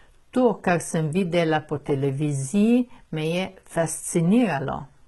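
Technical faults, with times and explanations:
Throughout, HE-AAC compression: the speech has that bright-but-fake top end, with sibilants coming out gritty and lispy, and nothing at all above about 11.8 kHz. The damage is heavy and sounds like a very low bitrate, around 16 kbps, likely HE-AAC v2. Only the lower band is really coded. The treble is patched in by copying lower bands upward under a coarse envelope, so harmonics don't line up across the join and the s sounds turn metallic.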